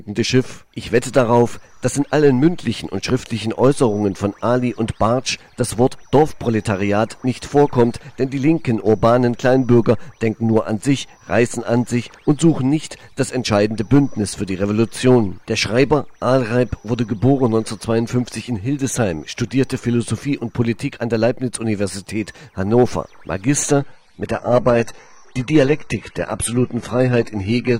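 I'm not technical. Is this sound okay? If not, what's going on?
No. From about 23.79 s to the end, the sound suddenly turns duller and watery, with the crisp top end gone and no gap. That's an adaptive stream at a lower bitrate: the connection slowed, so playback switched to a smaller, lower-quality version.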